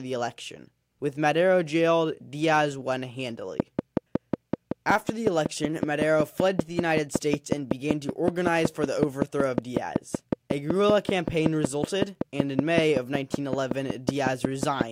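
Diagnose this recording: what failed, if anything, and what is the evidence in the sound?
A train of clicks runs from 3.60 to 14.82 s at a regular 5.35 per second. It appears as evenly spaced vertical spectrogram lines about 15 dB above the speech, likely from analogue interference.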